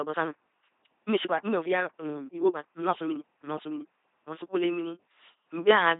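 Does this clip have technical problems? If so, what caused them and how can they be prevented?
Yes. Throughout, the speech is buzzy and robotic, which points to an LPC-10 vocoder at around 2.4 kbit/s rebuilding speech from pulses or noise through a simple filter. To prevent this, use a modern wideband codec with enough bitrate rather than LPC-10.

From 0.0 to 3.98 s, the speech sounds rushed at about 1.53 times normal pace, yet its pitch is unchanged. This is likely a time-stretched section, squeezed by dropping short pieces to fit a length. To prevent this, leave the timing alone, or trim pauses instead of compressing the speech itself.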